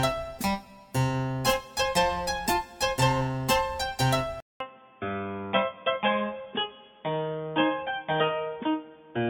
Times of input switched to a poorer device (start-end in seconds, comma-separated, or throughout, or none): 4.40-9.30